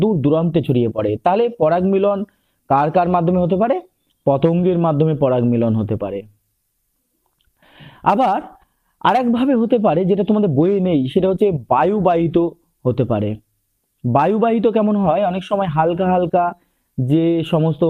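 No technical faults are audible.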